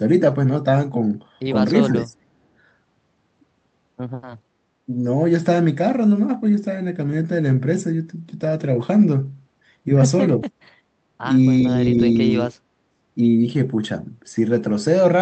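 Speech carried over an Opus call path, with its content ending near 8 kHz, shows two short dips where speech was suppressed in double talk and one faint burst of echo leak. From 1.84 to 2.17 s the level drops by roughly 15 dB for about 0.3 s, and from 11.64 to 12.58 s by roughly 10 dB across about a second. On the waveform these look like a sudden narrowing of the envelope. The likely cause is the echo canceller attenuating the near talker while the far end was also speaking. At 10.43 to 10.49 s a scrap of echo leak appears about 35 dB below the speech, delayed by 405 ms. On the spectrogram it shows as a faint smear of the earlier sound. It is likely residual loudspeaker pickup that the far end's echo canceller failed to remove.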